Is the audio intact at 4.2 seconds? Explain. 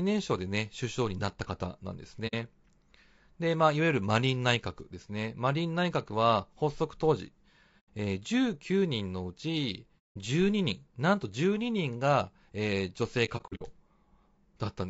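No. At 4.2 seconds the speech carries the low-delay AAC compression damage that runs through the whole clip. The voice sounds rough and grainy. Noise fills the gaps between the pitch harmonics, and the top band sounds thin and synthetic. The cause is likely AAC-ELD, the low-delay codec of video calls. Its short frames resolve harmonics poorly and spend more bits. At a rate that points to about 32 kbps, too few bits remain for clean detail.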